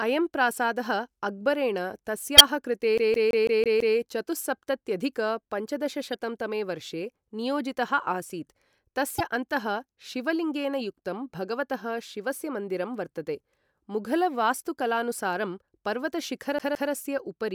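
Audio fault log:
2.37–2.41 s, 6.13–6.15 s, 9.17–9.21 s: damaged data in a compressed stream. Each is a brief chirp or blip where corrupted compressed frames were misdecoded or dropped, and the decoder lost sync and resumed at the next valid frame header.
2.98–3.97 s and 16.59–16.92 s: CD stuck on one turn. A scratch throws the laser back one track each revolution, so a segment of about 0.17 s repeats with a short mute at every jump. It repeats six times in the first run and twice in the second, giving the even, rapid skipping-CD stutter.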